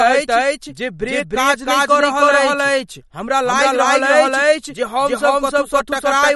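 From the very start the speech carries a doubled audio track: a second full-band copy trails roughly a third of a second behind, at about the same level. It has no reverb tail or room colour, so it's likely a second capture path or a misaligned edit rather than a real echo.

Running through the whole clip there's plainly audible MP3 compression. Nothing comes through above 11.8 kHz, and the consonants have that watery, swirly quality with smeared attacks, which points to a starved encoder at a low bitrate, likely around 48 kbps.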